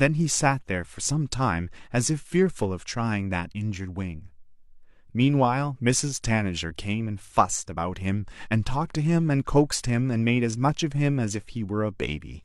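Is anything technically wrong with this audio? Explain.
No, nothing is technically wrong.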